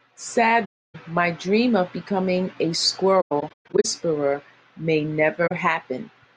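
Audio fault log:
0.65–0.96 s, AAC frame loss with muting: a 0.3 s soft-edged gap; the decoder zeroed the missing frames, so the sound fades out and back in.
3.21–3.86 s, AAC frame loss with muting: scattered dropouts over 0.64 s, the longest around 150 ms, each faded smoothly by the overlapping windows.
5.47–5.52 s, AAC frame loss with muting: a brief 43 ms hole that ducks out and in smoothly.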